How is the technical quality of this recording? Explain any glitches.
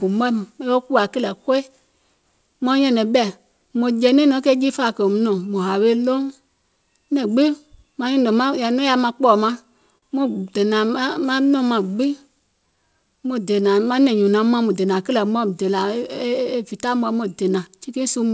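The recording has three timing glitches from the receiver's jitter buffer, all heard as short changes in pacing rather than lost audio. Nothing above 8 kHz comes through, which fits a wideband call codec such as G.722 at 64 kbps.

From 9.98 to 10.04 s there is a short stall from a late packet. A packet missed its playout time and the jitter buffer ran dry, so the receiver extended the last sound for 44 ms until the data arrived, then resumed at the same point. No audio is lost, but one sound is held slightly too long with a faint buzzy or dipped quality, and playback now runs 44 ms further behind.

From 11.06 to 14.03 s there is a jitter buffer slow-down. To rebuild its reserve, the receiver repeated single pitch periods and small slices of pauses many times over, adding 159 ms in total. The speech plays at about 95% speed while the pitch stays unchanged. Sounds and gaps come out drawn out.

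From 16.25 to 18.17 s there is a jitter buffer speed-up, the reverse correction. The buffer held more audio than its target, so the receiver trimmed short pieces of one or a few pitch periods over and over, removing roughly 150 ms. The speech plays at about 106% speed, still at the same pitch, and comes across as hurried.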